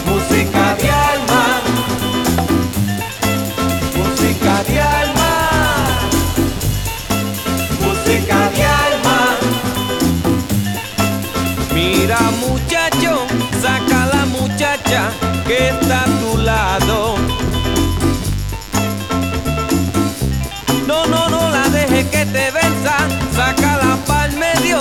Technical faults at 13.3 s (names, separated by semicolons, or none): DECT cordless phone buzz